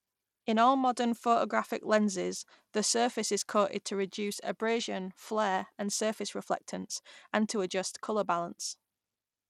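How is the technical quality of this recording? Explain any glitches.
Not great: there's plainly audible codec damage across the whole speech clip. Throughout, the treble flickers and a gritty grain sits on the voice. That's likely Bluetooth SBC compression with a starved bit pool, consistent with about 96 kbps, leaving the upper sub-bands short of bits.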